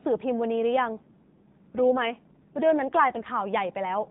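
From 0.93 to 3.31 s the speech turns rougher, buzzier and more synthetic, consistent with an AMR rate drop from about 12.2 to 5.9 kbps. Unlike packet loss, there is no gap, and the 4 kHz narrowband ceiling stays unchanged throughout.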